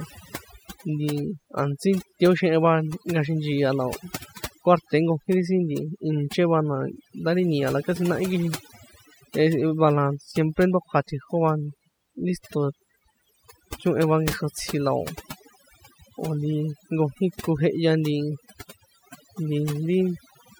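Overdone noise removal runs through the whole clip. A noise reducer set far too aggressively pulls individual frequency bands down or shuts them off whenever they sit near its noise estimate. Quieter parts of the speech vanish with them, leaving near-silent gaps with twinkling specks.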